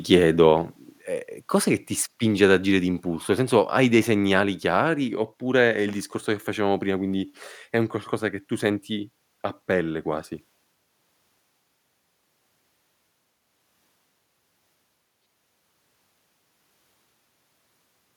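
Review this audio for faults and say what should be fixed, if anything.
At about 1.02 s, just before "ehm cos'è che ti", the whole speech signal and its background drop by about 3 dB in a single step. It's a microphone volume stepped down, likely the call software trimming input gain after sensing a hot level. To prevent it, disable automatic mic gain adjustment in the call app and set the input level manually with some headroom.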